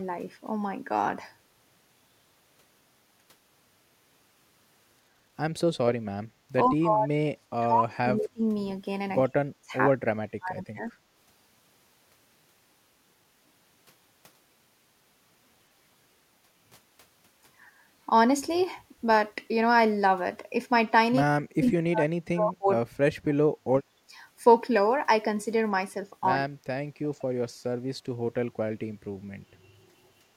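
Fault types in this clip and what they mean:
Background gated by the echo canceller: The canceller pulled the microphone down while the loudspeaker played. The room sound dips by about 11 dB for a brief moment near 6.3 s.
Speech suppressed in double talk: The talker's speech cuts out in chunks, dropping by roughly 40 dB for up to about two seconds, likely from the canceller mistaking it for echo.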